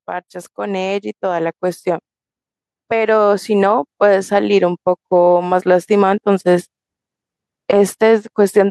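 A speech recording with automatic gain rising twice. From 0.55 to 2.14 s, the level climbs by about 4 dB. From 2.89 to 3.76 s, it climbs again by about 3 dB. The voice and the background noise swell together each time. That shared rise points to the gain stage, not the speaker. The automatic gain control judged the input too quiet and raised its gain gradually.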